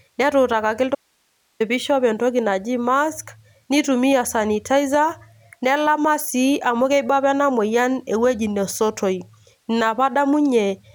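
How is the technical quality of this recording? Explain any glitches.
There's one clear glitch: an audio dropout to a faint residue from 0.95 to 1.60 s, where the speech abruptly vanishes into hiss roughly 45 dB down before "pishop entoki naji". That's likely a brief signal loss while the input path stayed live.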